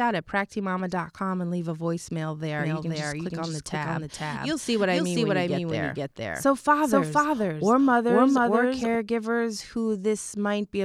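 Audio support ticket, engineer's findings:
Doubled audio track, 2.59–8.95 s. Full-band speech copy trailing by roughly half a second at about equal level. No decay or room colour, abrupt start and stop. Likely a second capture path or misaligned edit holding two out-of-step copies.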